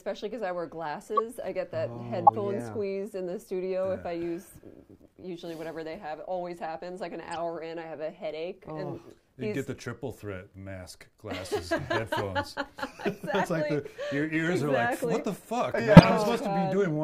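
Damaged compressed frames reached the decoder, which played them anyway (corrupt frame decoded). Each time, a few consecutive frames had misread gains or codes, putting energy at wrong frequencies for tens of milliseconds. The result is four short chirps or noise bursts in the audio: at 1.17 to 1.20 s, 2.27 to 2.30 s, 7.31 to 7.37 s and 15.97 to 16.02 s. The burst at 7.31 s is faint, peaking near −30 dBFS, while the others peak loud, around −10 to −5 dBFS.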